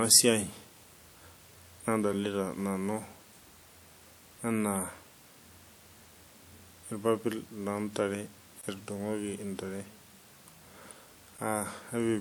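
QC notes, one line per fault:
Throughout, computer activity noise. A faint buzzy chatter sits under the speech at about 40 dB below it, pulsing at roughly 100 times a second. It does not follow the speech. It follows the computer. Load changes in the processor or graphics card shift the ground that the audio circuit shares. That shift rides into the signal as a rapid buzz that comes and goes with the machine's work, not with the talker.
8.61 to 8.63 s and 11.37 s, block of digital silence. The first gap, between "irpapit loo ntare" and "etudungoki intare", lasts 20 ms. The second lasts 10 ms. Each time, the sound drops straight to silence and then jumps back with no fade, so the 20 ms hole comes across as a brief dropout and the 10 ms one as a sharp tick. Output blocks of this size that arrive empty point to a buffer the software did not fill in time.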